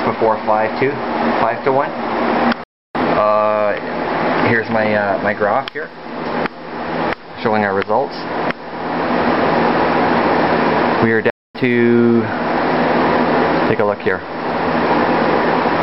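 The audio cuts out twice in mid-flow, a fault known as a playback stall. The first gap runs from 2.64 to 2.95 s, about 310 ms of silence. The second runs from 11.30 to 11.55 s, about 245 ms. Each time the sound simply stops, then resumes. The likely cause is the player running short of data, or its thread being briefly blocked, so nothing reached the output until it recovered.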